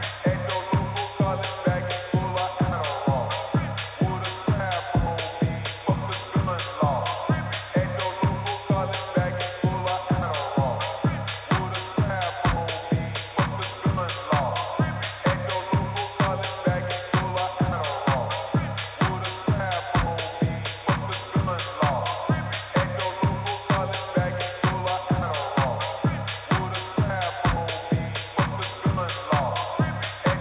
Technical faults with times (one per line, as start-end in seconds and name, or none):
none